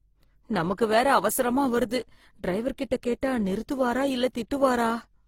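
All the way through, the speech carries layered smearing and swirly artefacts, likely from transcoding between lossy codecs, maybe low-rate Opus then HE-AAC, with nothing above 16.3 kHz.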